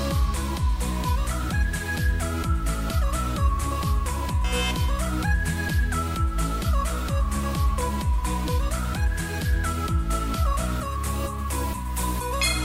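No technical faults can be heard anywhere in the audio; the signal stays continuous and steady throughout.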